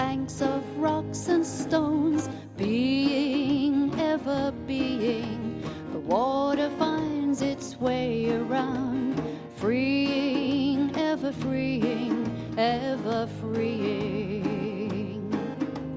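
No technical faults are audible anywhere in the audio.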